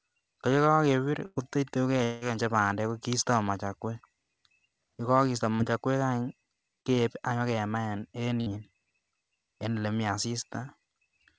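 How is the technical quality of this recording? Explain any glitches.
The recording is speech with five packet-loss glitches. The band stops at 8 kHz, which fits a wideband call codec such as G.722 at 64 kbps.

Burst of packet loss, 1.26 to 1.38 s and 8.41 to 8.50 s: About 100 ms and then about 60 ms of audio never arrived. The receiver extended the last sound and turned it down, so each gap becomes a fading held buzz or hiss before the speech resumes further on. On a spectrogram the harmonics or noise repeat almost unchanged and fade, then the speech resumes with a hard edge.

Long network dropout, 2.04 to 2.23 s: About 180 ms of speech is missing. The gap is filled throughout with a continuation of the preceding sound that fades but never reaches silence, and the part in between is lost. The likely cause is a longer network outage concealed by the receiver. On a waveform the envelope decays smoothly across the gap, and a spectrogram shows stretched, blurred harmonics with no new speech detail.

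Short concealed packet loss, 5.55 to 5.61 s and 6.81 to 6.87 s: Each time, roughly 40 ms failed to reach the decoder in time. The receiver synthesised a stand-in from the preceding pitch or noise and then blended back into the real signal. This is heard as a brief smear or wobble. On a spectrogram it appears as a short patch of smoothed, repeated texture, and on the waveform as slightly flattened cycles with no clean break.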